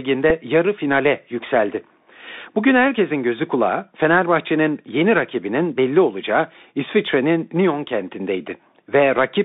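From start to finish the speech sounds boxed-in and narrow, with scratchy s sounds, a granular hiss underneath and roughness on loud bright syllables. Only about 200 Hz to 3.7 kHz gets through. This is the Bluetooth CVSD headset codec, whose one-bit-per-sample delta coding, consistent with a 64 kbps link, cannot keep pace with fast, loud high-frequency movement.

At 0.30 s, just before "yarı finale yükseldi", there is a small, brief tick. This is a Bluetooth headset packet repeated. About 3.8 ms of audio went missing, which points to a single lost packet, and the chip decoded the previous packet's bits a second time.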